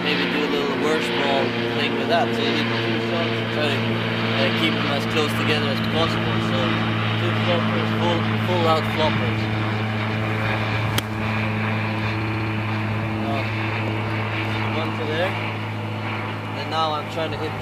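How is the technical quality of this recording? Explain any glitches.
Two short stutters come from repeated frames. At 5.84 s, a 64 ms block plays twice. At 12.21 s, a 64 ms block loops six times, adding 320 ms. Duplicated compressed frames reach the decoder, so the same slice replays.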